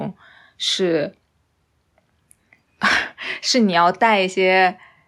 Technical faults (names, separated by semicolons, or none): none